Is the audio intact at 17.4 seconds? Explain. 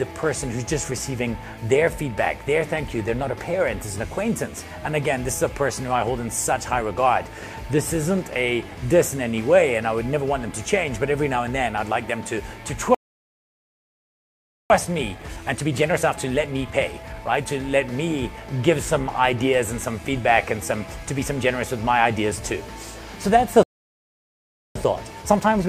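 No. At 17.4 seconds the audio is inside a time-compressed catch-up running from 14.7 to 17.7 seconds. After a stall, the player works off its backlog by dropping short slices and cross-fading the joins. The sound plays about 1.15 times fast at normal pitch.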